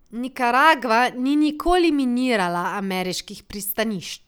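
Nothing goes wrong anywhere in this short bit of speech; there's no technical fault to point to at any moment.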